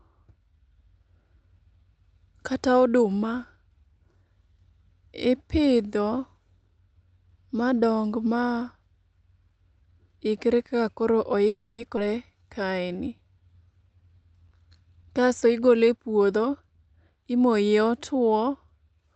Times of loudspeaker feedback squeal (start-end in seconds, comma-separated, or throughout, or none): none